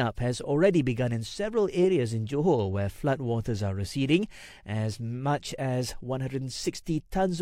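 Nothing in this speech recording trips a fault of any kind, so there's nothing to flag at any point along the way.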